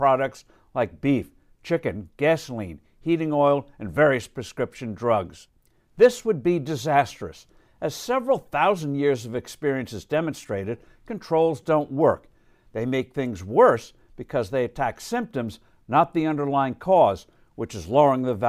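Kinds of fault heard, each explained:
Repeated buffer: new audio arrived late, so the device replayed its last 5.33 ms block, once then three times, heard as two brief clicks or buzzes.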